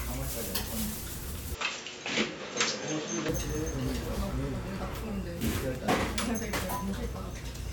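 From 1.55 to 3.29 s the sound turns duller, with nothing above 7.6 kHz and a faint new background hiss, likely from an input switched to a poorer device, not simple filtering.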